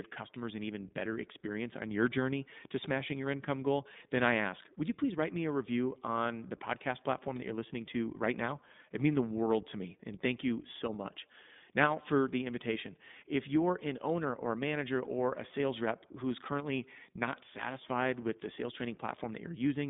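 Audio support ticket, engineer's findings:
iLBC codec damage, whole clip. Speech band-limited to about 150 Hz to 3.7 kHz, nothing above 3.8 kHz; roughness fits 20 ms frames near 15.2 kbps, each coded independently. Unlike a plain telephone filter, plainly audible synthetic grain and frame-rate roughness.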